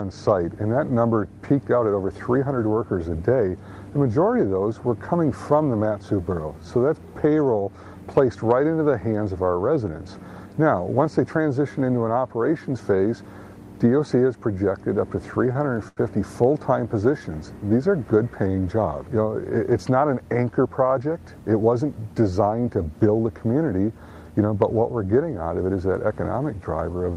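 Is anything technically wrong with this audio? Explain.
Yes. From 15.31 to 16.00 s there are repeated stalls (stutter): packets reached the receiver late, so the jitter buffer ran dry five times, and each gap, the longest about 83 ms, was bridged by extending the preceding sound. Nothing is lost, but that stretch drags and hiccups. The call path's coding, which points to Opus at a modest bitrate, tops out around 12 kHz.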